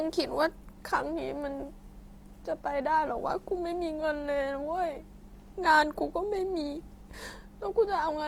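A speech clip whose whole length sounds grainy and rough, with a plainly audible noisy texture on the voice's tonal parts rather than swirling or watery holes, while the top end still reaches up to about 20.2 kHz. That combination points to Opus compression, likely in its fullband music mode at a low rate around 24 kbps, where the encoder holds each band's energy but fills the detail with folded or noise-like content.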